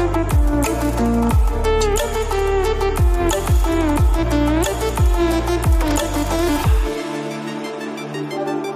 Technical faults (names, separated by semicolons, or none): corrupt frame decoded